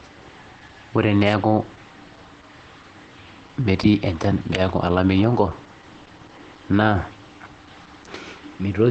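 Muffled, slightly hoarse and faintly robotic from start to finish, the speech has nothing above about 8.5 kHz, and its grain is plainly audible throughout. This is Opus voice compression. The encoder has narrowed the band to wideband and coded the speech with its linear-prediction coder, modelling the vocal tract and spending too few bits on the excitation. The roughness suggests a low bitrate around 12 kbps.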